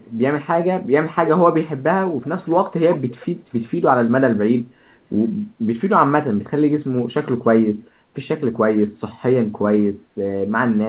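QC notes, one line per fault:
0.00–0.12 s, 2.97–3.26 s, 3.45–3.62 s, echo leak: the far-end echo canceller likely passed residual loudspeaker pickup, so a faint copy of the speech returns about 330 ms late, near 40 dB down, reaching about 25 dB down at 2.97 s.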